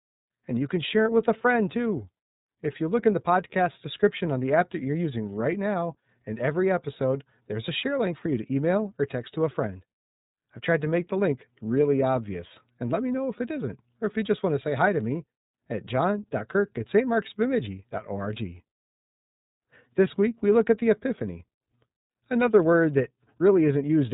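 From start to finish the speech sounds boxed-in and slightly buzzy, with a rough, synthetic edge on every syllable and no air or sibilant brightness above about 3.8 kHz. That is the iLBC codec at work: a narrowband VoIP coder that rebuilds the excitation of each 30 ms frame on its own, which fits its 13.33 kbps mode. The plainly audible coarseness comes from that frame-by-frame coding, and the dull top from its band limit.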